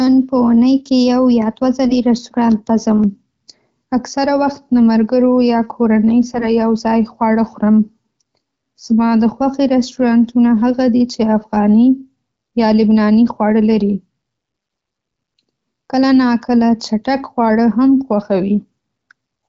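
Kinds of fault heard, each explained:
AMR bit errors: For about 0.15 s, from 6.34 to 6.49 s, just after "له ملګرو یا کورنۍ", the speech turns hoarse, scratchy and gargly. Flipped bits in the less protected part of the wideband codec frames, a few percent of them, put the excitation pulses in the wrong places and push the fine pitch, gain and spectral values off. The damage spans a handful of frames. Unlike a packet dropout, the sound never gaps or fades: pitch and loudness roughly hold while the texture corrupts.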